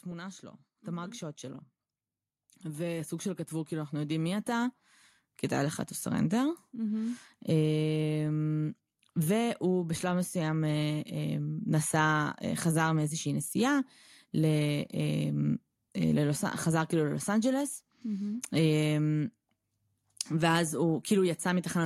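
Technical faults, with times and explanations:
0.05 to 7.28 s, automatic gain rising: the gain control heard a quiet input and crept up about 14 dB, so speech and background swell together.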